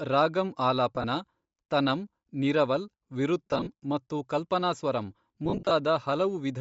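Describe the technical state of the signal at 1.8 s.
At 1.8 s, as throughout, the speech has a grainy, breathy top end, likely from Bluetooth LC3 compression refilling discarded highs with noise rather than simply dulling them like a low-pass.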